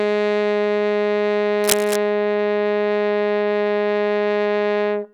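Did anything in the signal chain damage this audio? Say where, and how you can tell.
Yes: cable scratch noise from 1.64 to 1.97 s, in the analogue wiring. A dense, ragged burst of scratching sits over the music there, only a little below it. The likely cause is a worn cable or connector being moved, its contact resistance fluctuating rapidly.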